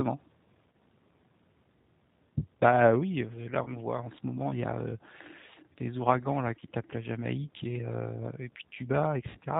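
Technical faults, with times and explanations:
Throughout, G.729 codec: the speech sounds plainly rough, slightly synthetic and dull, with nothing above 4 kHz. This fits an 8 kbit/s G.729A coder, which rebuilds each 10 ms frame from a vocal tract filter, a pitch predictor and a few pulses, discarding fine detail.
0.72–0.74 s, 3.64–3.72 s, 6.59–6.62 s and 9.29–9.38 s, VoIP packet loss concealed by the speech codec: brief buzzy or noisy, smeared patches where the sound is stretched and fades, then recovers weakly. Each of the first three gaps covers about 20 ms of missing audio, which fits one lost packet. The last covers about 60 ms, which fits three lost packets in a row. The decoder fills each gap by extending its last pitch and filter at falling gain.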